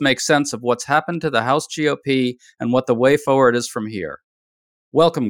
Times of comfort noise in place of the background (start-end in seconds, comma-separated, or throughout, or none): none